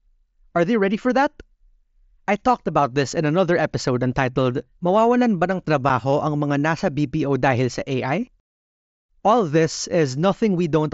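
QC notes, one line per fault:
5.89 s, unconcealed Bluetooth headset packet loss: right after "ba ng" there's a tiny hole of about 7.5 ms before "ang mga nasa". Nothing patches it, so the speech drops straight to silence with hard edges. That fits one lost packet on the mSBC wideband link.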